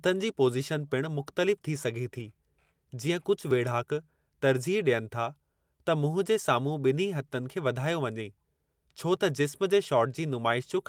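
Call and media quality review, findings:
Clock drift buffer slips, regular clicks in speech every 1.89 s from 1.63 s to end of clip. Likely cause: two devices on independent clocks, mismatch on the order of several hundred ppm. Jitter/resampling buffer between them drifts until it drops or repeats a block of a few tens of samples. Each slip is an audible tick at a steady interval.

Lost packets rebuilt from error correction at 2.15–2.21 s (two packets, 40 ms rebuilt), 3.19–3.21 s (one packet, 20 ms) and 7.43–7.45 s (one packet, 20 ms). Network loss was covered by the low-bitrate in-band FEC copy carried in the following packet (Opus). No gap in the speech, but brief rough, noisier patches where the decoder played the coarse copies.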